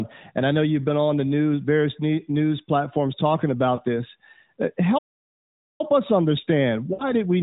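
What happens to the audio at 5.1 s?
At 5.1 s the speech sits inside a playback stall: from 4.98 to 5.81 s, about 0.81 s, the sound cuts out mid-flow, likely because the player ran short of data or its thread was blocked. It resumes on "us understand". The waveform shows a flat gap and the spectrogram a blank vertical band across all frequencies.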